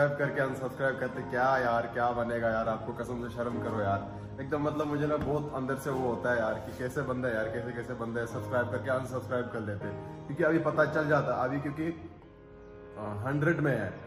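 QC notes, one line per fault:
No fault found in this audio.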